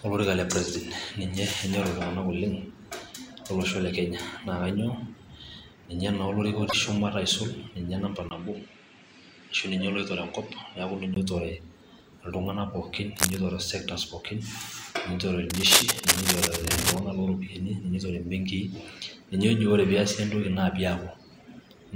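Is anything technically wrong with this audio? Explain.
Yes, there are three kinds of fault.

From 6.66 to 6.74 s there is damaged data in the compressed stream. Corrupted frames are misread or rejected, and the decoder loses sync until it finds the next valid frame header. The result is a brief glitch that breaks the speech for about 76 ms.

From 8.29 to 11.16 s the input was likely switched to a poorer device. After a 20 ms gap the speech loses everything above 9 kHz and turns duller and boxier. The level stays about the same, and a faint new noise floor sits far below the speech. The full band returns at 11.16 s.

Cable scratch noise appears twice, likely from a worn cable or connector being moved so its contact resistance fluctuates. The first burst, 13.16 to 13.38 s, is roughly as loud as the speech. The longer one, 15.50 to 17.00 s, is somewhat louder than the speech. Both are heard as dense, uneven scratching laid over the speech.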